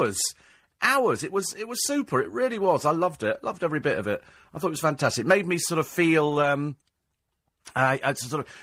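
At 6.25 s, just after "made me sort of", there is a lost packet rebuilt from error correction, running to 6.47 s. The decoder filled about 120 ms, which fits six separate 20 ms packets, from the low-bitrate copies carried in the packets that followed. There is no gap or dropout. Instead, that stretch of speech turns briefly coarser and noisier, with a grainy texture that clears once regular packets resume.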